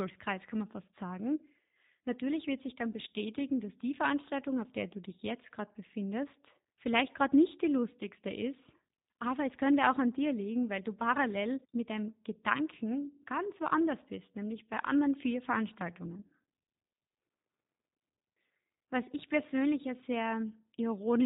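From start to finish the speech has been through the G.729 codec, and it shows. Nothing above 4 kHz survives, and the rebuilt voice has that slightly rough, synthetic edge, which fits a narrowband 8 kbit/s coder like G.729A modelling each frame rather than preserving the actual waveform.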